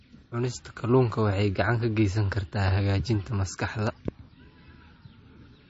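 Throughout, the speech carries plainly audible MP3 compression artefacts, likely from a low-bitrate encode near 32 kbps: nothing reaches above 7.6 kHz, and the sound turns watery and swirly. At 2.68 to 2.70 s, just before "hagaajinta maskaxda", a loud pop, likely an electrical voltage step, punches roughly 10 dB above the speech. A second, similar pop follows at 4.08 to 4.10 s, just after "hagaajinta maskaxda".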